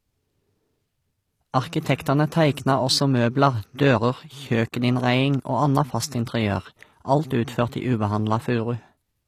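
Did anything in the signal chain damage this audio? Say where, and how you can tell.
Yes. HE-AAC compression runs through the whole of this speech clip, at the codec stage. The upper spectrum sounds bright but synthetic: s sounds come out gritty and lispy, with a metallic sheen that doesn't sit naturally on the lower harmonics. That points to spectral band replication, which is likely the cause. The codec keeps only the lower band and rebuilds the treble by copying lower bands upward under a coarse envelope, and the degree of damage fits a low bitrate of around 24 kbps.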